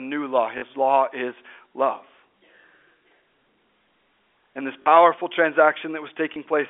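Packet loss with last packet repeated at 0.58–0.62 s, 2.62 s, 4.82–4.86 s and 6.34 s: replayed 20 or 40 ms segments, fitting 20 ms packets, give short robotic stutters where two packets were repeated and small blips where one was.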